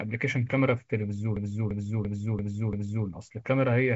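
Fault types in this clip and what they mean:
System hang loop: from 1.37 to 3.07 s, one 341 ms piece of speech replays exactly five times at 2.93 Hz, which fits a 16384-sample ring buffer. Unlike a dropout or a skip, identical audio keeps returning rather than going silent or jumping ahead.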